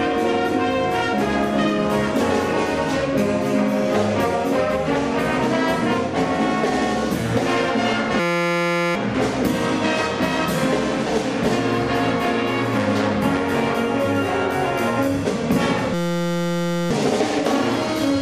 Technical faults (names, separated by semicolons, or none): system hang loop